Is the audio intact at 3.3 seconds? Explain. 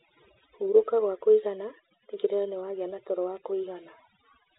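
No. At 3.3 seconds, as throughout, overdone noise removal is cutting spectral bands near the noise estimate, leaving near-silent gaps with twinkling specks.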